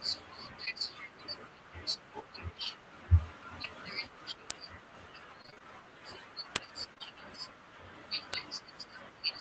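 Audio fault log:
0.65 s, 3.63 s and 6.94 to 7.02 s: short concealed packet loss. Each time, 20 ms of the call stream arrived too late or not at all, and the decoder covered the hole by extending the sound just before it, pitch-continued where voiced and shaped noise where not, then blended back. The first two patches last only about 11 to 12 ms. The third is two back-to-back 20 ms losses, about 40 ms of guessed audio, heard as a brief smear or wobble.
0.67 to 0.69 s and 3.64 to 3.66 s: lost packet rebuilt from error correction. In both spots a single 20 ms packet went missing, but the next packet carried a low-rate backup copy through Opus in-band forward error correction. The decoder switched from its guess to that copy partway through each gap, so nothing drops out. Those 20 ms sound coarser and noisier than the surrounding audio, a roughness in place of silence.
4.51 s, 6.56 s and 8.34 s: bit error spike. 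A flipped bit in the stored or transmitted samples made the waveform jump by a power of two for just two or three samples before snapping back. Because the jump has nothing to do with the underlying sound and lasts well under a millisecond, it spreads energy across the whole spectrum and is heard as a sharp, isolated tick at each of these three moments.
5.42 to 5.62 s: repeated packet loss (robotic sound). Within this 0.2 s stretch, five separate gaps of up to 24 ms each were patched by continuing the preceding sound, and about half of the span ended up concealed rather than decoded. The patches follow each other too closely for the real signal to re-establish itself, so the audio turns choppy, with fragments missing. The surrounding Opus coding stops near 8 kHz, at a rate that points to about 24 kbps.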